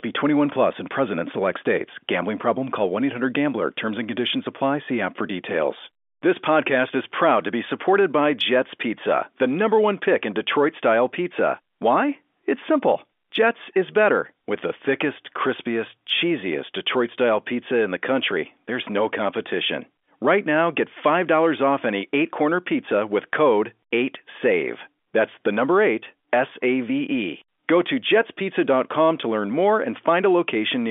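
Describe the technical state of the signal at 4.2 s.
At 4.2 s the speech is intact, carried in the narrow telephone band of the G.711 line with no fault present at that moment.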